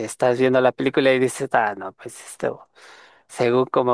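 No technical faults can be heard anywhere in this short speech recording; the signal stays continuous and steady throughout.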